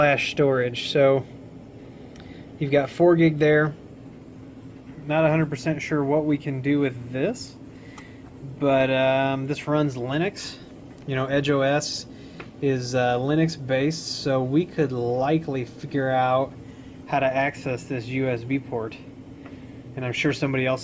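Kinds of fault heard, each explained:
Nothing here stands out as a fault; the audio runs along without any glitch, dropout or distortion catching the ear.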